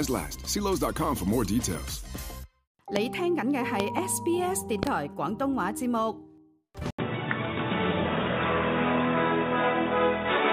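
Loud pops hit at 2.96–2.98 s, then as pairs at 3.80–4.00 s and 4.83–4.89 s. They stand far above the sound. A likely voltage glitch or static discharge caused them.

At 6.9 s, an 80 ms gap comes first. Then the sound turns dull and loses everything above 3.8 kHz. Its level shifts a few dB, and a faint new noise appears. The input likely switched to a poorer device.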